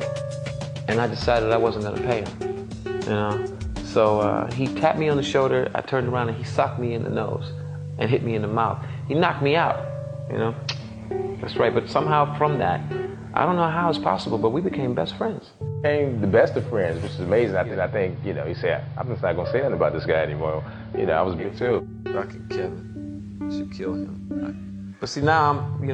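The clip is a recording with a digital radio blending to analogue fault. From 17.64 s to 21.51 s the receiver loses the digital signal and cross-fades over about 140 ms to the station's AM broadcast, then returns to digital. During that stretch the audio narrows in bandwidth as AM does, drops about 1 dB in level, and carries hiss well below the signal. The steady hiss and the smooth fades to the same programme set it apart from a streaming bitrate drop.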